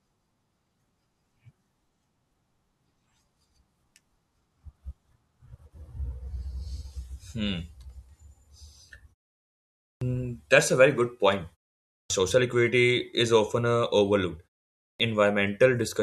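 At 9.82, 11.90 and 14.81 s, clipped start after a pause: the output wakes late and swallows about 0.19 to 0.20 s, so "that's a very good", "equity is often uh" and the phrase after "is often uh overlooked" start abruptly. Unlike muted pauses, speech itself is lost.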